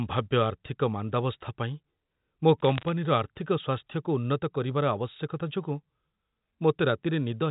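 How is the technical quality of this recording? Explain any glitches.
The audio has one glitch on a narrowband phone line. Everything is cut off above 4 kHz, as G.711 telephone coding does. From 2.60 to 2.89 s there are bit errors on a digital phone line. A few tenths of a percent of bits are flipped, and each flip corrupts one logarithmic sample, so hits on high-order bits jump out as sharp ticks. The result is brief crackle over speech that continues unbroken. Packet loss would instead leave gaps or smeared, repeated sound.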